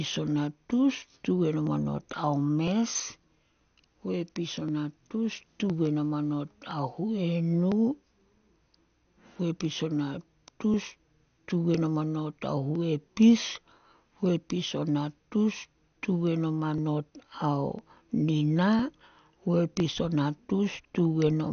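Starved of bits, the encoder shuts off whole upper sub-bands, leaving nothing above 6.5 kHz, and coarsely quantises the rest. The speech sounds dull, with a gurgling, granular edge throughout, the plainly audible signature of MP2 compression, likely at a low rate near 48 kbps.

From 0.66 s to 20.81 s, two devices running on mismatched clocks, off by roughly a thousandth, likely cause clock drift buffer slips. A few dozen samples are dropped or repeated every 1.01 s, about twenty times in all, each heard as a regular click while the speech continues.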